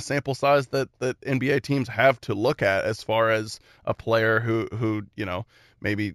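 Throughout the speech runs imaging from linear upsampling, which fits a rate raised from 16 kHz to 44.1 kHz by straight-line interpolation. The top is dulled, and a faint mirror copy, roughly 30 dB down, fills 8 to 16 kHz. It is a steady metallic shimmer on sibilants, unlike the warbling swirl of codec artefacts.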